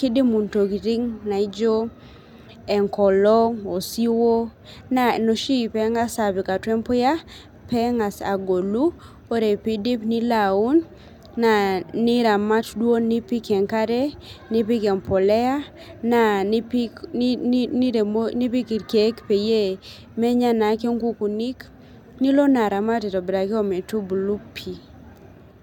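No technical faults detected.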